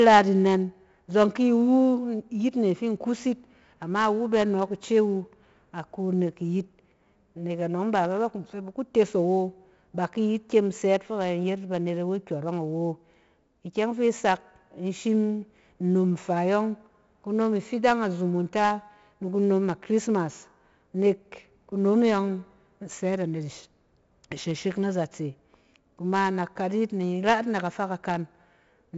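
Speech run through 4-bit ADPCM compression the whole way: heavy gritty hiss riding every loud syllable, and nothing above about 7.7 kHz, which fits a 64 kbps stream at a low sample rate.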